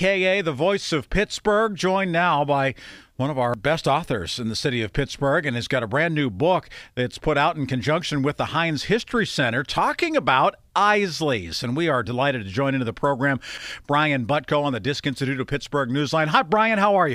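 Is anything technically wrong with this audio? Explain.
Yes. Two CD skips occur, at 3.54 s and 13.58 s. At each, the laser jumps to a different turn of the disc's spiral, and the player briefly mutes, for only a few milliseconds, before resuming from that new position. You hear a tiny tick followed by a sudden discontinuity in the speech. Unlike an ordinary click or dropout, where the sound picks up exactly where it left off, a skip resumes at a different point in the material.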